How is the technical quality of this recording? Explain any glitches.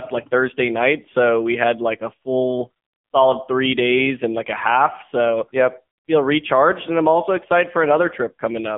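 The recording is poor, with heavy codec damage for its whole length. The speech has passed through an AMR narrowband mobile codec at one of its lowest modes, which fits a bitrate near 6.7 kbps. The line passes roughly 200 Hz to 3.4 kHz, with nothing above 3.5 kHz, so the voice is thin and muffled. At so few bits, the codec's vocal-tract model and sparse pulse excitation make the speech buzzy and synthetic throughout.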